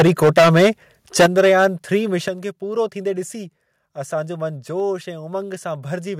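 From 0.0 to 0.69 s and from 1.19 to 1.66 s, the loudest syllables crackle harshly. This is likely microphone overload, with peaks about 12 and 14 dB past the converter's limit and their tops flattened. Unlike codec distortion, this damage tracks loudness.

At 1.26 s, inside that second stretch, and at 2.28 s, just before "खे पूरो थींदे", voice and background drop together by about 9 and 7 dB. This is likely the microphone volume stepped down in one jump, not faded.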